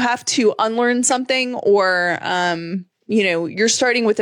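Nothing technically wrong turns up anywhere in this bit of speech, so there's no fault to pin to a time or trace back to a cause.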